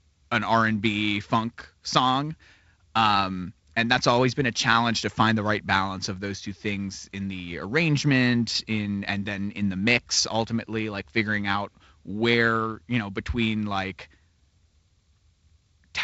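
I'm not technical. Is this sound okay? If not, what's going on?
Yes, no faults found; the speech has come through wideband telephone coding (G.722), so nothing is present above about 7.7 kHz.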